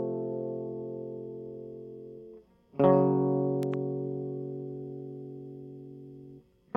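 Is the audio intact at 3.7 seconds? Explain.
No, a loud pop sits at 3.63–3.76 s: two sharp pops about 10 dB above the music, likely a voltage pulse from a plug, switch or static.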